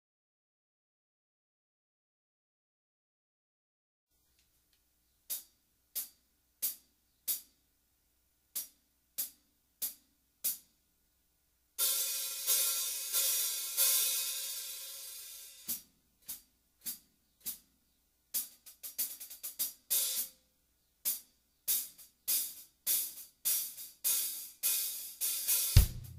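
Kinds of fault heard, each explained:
No technical faults are audible anywhere in this audio.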